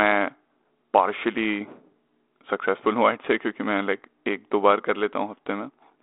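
No technical faults can be heard in this speech.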